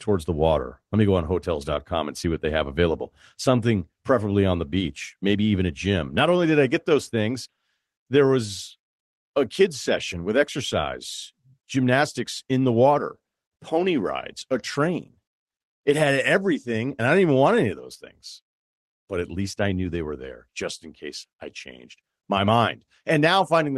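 No faults found in this speech; it has passed through a call codec whose top end stops around 12 kHz, which fits Opus at a modest bitrate.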